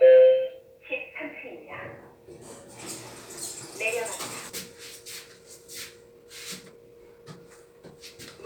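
At 4.49 s the audio skips ahead. About a second of sound never plays, and the material on either side is butted together with no silence or fill between them. This happens when a run of audio is lost in transit or discarded by an overflowing jitter buffer while later audio is already queued. Unlike a dropout, which leaves an audible hole or muted gap, nothing here marks the loss except the abrupt change in the sound itself.

From 6.05 s to 7.98 s a jitter buffer speed-up makes the sound run at about 120 percent of normal speed. The buffer had built up more audio than its target, so the receiver trimmed many short slices, each one or a few pitch periods long, removing about 0.4 s in total. Pitch stays where it was, which separates this from a simple fast replay or resampling error. The passage feels rushed and compressed in time rather than higher or thinner.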